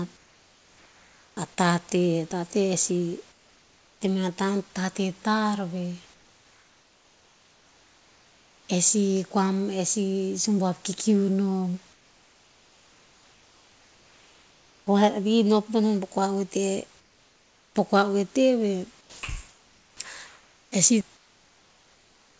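Speech recording in which the real room background gives way to steady, featureless comfort noise, about 4 dB quieter (about 5 dB at 17.00 s), at 0.17–1.37 s, 3.32–4.01 s, 6.14–8.69 s (after "tar veh", before "eh sih kua mon"), 11.93–14.87 s (after "sih sumbuav kikiu nom") and 17.00–17.75 s (before "po kua oete veh"), and the same comfort noise runs from 19.01 s to the end. The likely cause is discontinuous transmission with receiver-side noise fill. The sound dropped by the voice detector at 19.01–19.22 s is a separate fault: roughly 130 ms of real sound is cut and replaced by the same synthetic noise, likely because the detector took that sound for background.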